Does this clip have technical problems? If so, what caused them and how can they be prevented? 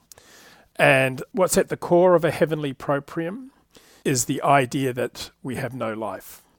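No, nothing stood out as a technical problem on listening to this clip, so there is nothing here that needs preventing.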